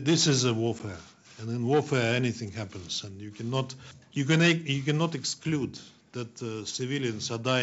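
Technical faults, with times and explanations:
0.79–0.82 s, packet loss on an ADPCM call: a hard-edged 10 ms silent hole, roughly one packet, then brief distortion while the decoder's predictor and step size resynchronise.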